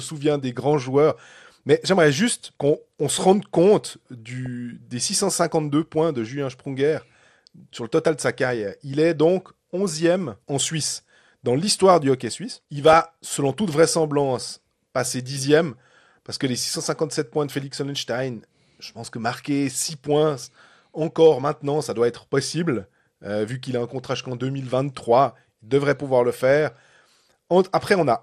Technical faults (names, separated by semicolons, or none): MP2 compression; DAB burbling